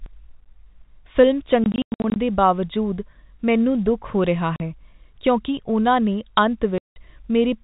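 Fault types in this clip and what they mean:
Packet loss filled with silence: from 1.64 to 2.16 s, just before "ਦੇ ਬਾਵਜੂਦ ਮੈਨੂੰ ਦੁੱਖ", about 280 ms of audio vanishes in scattered holes across 520 ms, the longest 100 ms. A 40 ms gap follows at 4.56 s after "ਮੈਨੂੰ ਦੁੱਖ ਹੋ ਰਿਹਾ", and a 180 ms gap at 6.78 s after "ਕਿਉਂਕਿ ਉਨ੍ਹਾਂ ਨੇ". Missing packets were replaced by dead silence, so the speech is chopped with hard edges. The gap lengths fit 20 ms packets.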